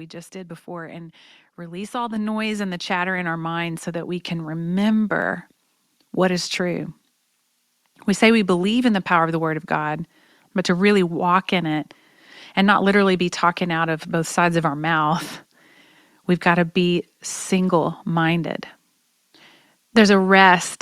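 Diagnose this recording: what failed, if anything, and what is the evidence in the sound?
Call processing stepped the microphone volume up twice, raising the device's input gain in single jumps after judging it too quiet. Speech and background rise together by about 5 dB at 2.16 s, after "and release all the", and about 4 dB at 4.2 s, after "mind so that we".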